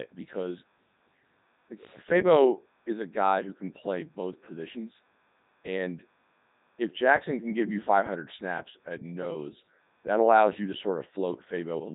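Computer activity noise runs under the whole speech clip. A faint buzzing chirp pulses around 500 times per second, tracking the computer's load rather than the speech. The Codec 2 vocoder also affects the entire recording. The speech is rebuilt from sine waves, so it sounds robotic and buzzy. The heavy damage fits a 3.2 kbit/s rate, and nothing remains above 3.8 kHz.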